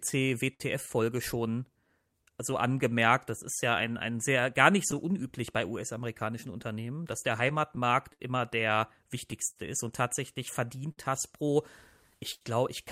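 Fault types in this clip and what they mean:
Clock drift between sender and receiver: The sender's audio clock runs slower than the receiver's, by around 5 percent. The receiver's jitter buffer therefore keeps draining. To keep going, the receiver repeats short pieces of audio and sometimes runs out of material for a moment. In this speech clip, the timing hiccups recur from start to finish at uneven intervals. They are what drive the corrections described below.
Repeated stalls (stutter): Packets arrived late or too slowly, so the jitter buffer ran empty several times in quick succession. Each time, the receiver continued the last sound until data came in. This happens from 0.11 to 0.62 s, with three gaps totalling 75 ms, the longest 59 ms. It happens again from 9.32 to 10.99 s, with four gaps totalling 130 ms, the longest 61 ms. Nothing is lost, but the speech drags and stutters.
Repeated timing corrections: Because the sender's clock is slower, the receiver keeps stretching the audio by repeating short pieces. 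The edits all go the same way but are unevenly spaced. They run from 0.27 to 12.10 s and play the speech at about 98 percent speed. In total they add roughly 300 ms. Each edit is small and may be heard as a hiccup or an unsteady tempo.
Scattered short gaps: Individual packets went missing or arrived late, one here and one there, between 6.54 and 8.22 s. The receiver filled each hole by continuing the last sound. There are roughly seven gaps, covering about 100 ms in total. The longest is around 70 ms. No audio is actually missing. The speech stays clear between the gaps, which come through as brief ticks, smears or tiny dropouts.
Short stall from a late packet: One packet was not there when it was due, and the jitter buffer ran empty. It happens at 12.34 to 12.43 s, near the end of the clip. The receiver held the last sound for 69 ms, which matches the packet's 69 ms extra delay. Then it carried on from the same point. 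Nothing is lost, but one sound is held too long.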